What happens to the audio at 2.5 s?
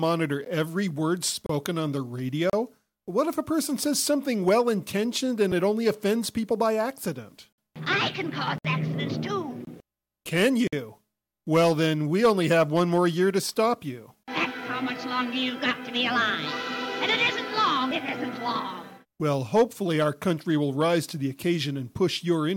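Right at 2.50 s the sound drops out for about 34 ms, until 2.53 s, in a gap between stream segments. The timestamps of two adjacent chunks don't quite meet, so the player fills the hole with digital silence, which fits one-second segments. You hear a short, hard-edged dropout with abrupt cut-out and cut-in edges. Nothing is actually lost; the audio just resumes a touch later than it should.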